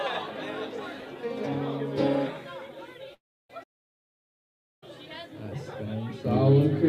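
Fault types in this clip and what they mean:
Long network dropout: at 3.14 s the sound smears into a fading buzz, then goes silent until 3.50 s. This is likely lost packets. The spectrogram shows a blurred tail, then a blank gap.
Playback stall: from 3.63 to 4.83 s the output goes silent for about 1.19 s, likely from player starvation. The waveform stays flat throughout, and the spectrogram shows an empty band.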